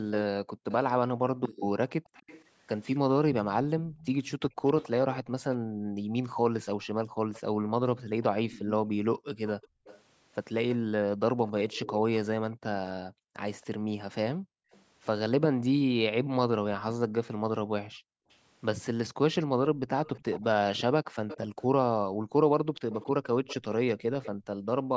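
From 0.14 to 14.81 s a faint delayed copy of the speech trails it by 273 ms, roughly 20 dB below it. On a spectrogram the harmonic bands repeat as a weaker ghost shifted right. This echo leak is likely a speakerphone on one side whose echo canceller failed to remove its own playback.

From 0.44 to 24.9 s the background is gated by the echo canceller, dipping by up to about 40 dB for around four seconds in total. These dips show as gaps in the spectrogram's noise floor and near-flat stretches in the waveform.

The echo leak returns from 18.31 to 24.29 s with the same 273 ms delay, now louder at roughly 15 dB below the speech, so its ghost traces stand out more clearly.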